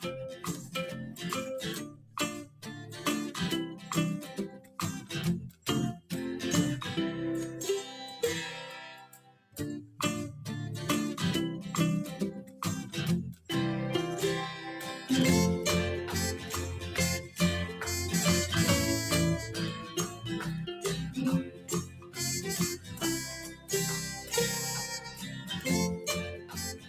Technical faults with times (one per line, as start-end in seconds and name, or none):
0.00-26.89 noise suppressor applied to music or sounds
0.00-6.11 sound cut by the noise suppressor
9.04-10.00 sound cut by the noise suppressor
12.42-13.49 sound cut by the noise suppressor
19.80-26.89 sound cut by the noise suppressor